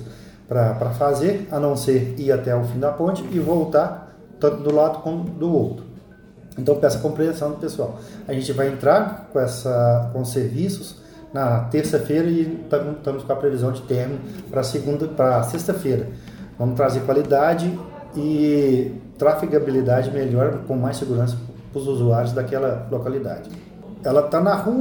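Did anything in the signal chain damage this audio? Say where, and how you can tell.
No, nothing in the signal chain stood out as damaging this audio on listening.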